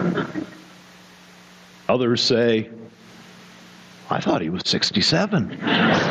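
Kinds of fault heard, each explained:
Gain pumping: throughout the clip the gain swings by about 25 dB. The likely cause is input gain set far too high, with a fast limiter or compressor clamping down on every peak. Unlike a noise gate, which cuts the background to silence between sounds, here loud and soft passages end up squashed close together.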